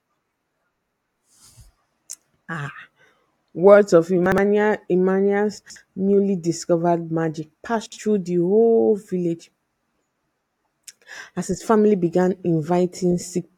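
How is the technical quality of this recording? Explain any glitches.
The recording has three short glitches, all chunks out of order. At 4.26–4.38 s, just after "words of", one 60 ms chunk plays one slot late. At 5.58–5.76 s, just before "newly discovered magic", a chunk lands two slots late. At 7.86–7.98 s, between "newly discovered magic" and "through the whole village", one chunk plays one slot late. Nothing's missing, just reshuffled, so each spot sounds like a brief jumbled stutter.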